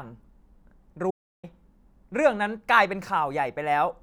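At 1.11 s the speech cuts out into total silence until 1.43 s. This audio dropout to silence lost about 0.33 s, likely from a failed input link.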